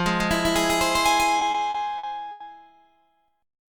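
Throughout, the same sound is likely being captured a second time through a slower path, so a copy about as loud trails roughly 150 ms behind, giving a flat, dry doubling. From 1.39 to 2.42 s, repeated stalls (stutter): late packets emptied the jitter buffer five times, and the receiver stretched the last sound over about 230 ms, the longest wait 90 ms, so the sound drags and stutters without dropping anything.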